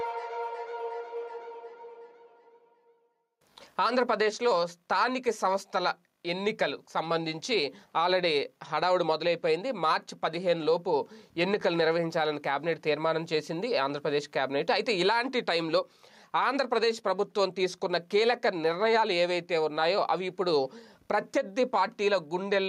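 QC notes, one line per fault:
Throughout: gain pumping. The gain swings by around 5 dB. Loud and soft parts sit close in level, so the sound is squashed. The likely cause is gain set far too high, with a fast limiter pulling it down.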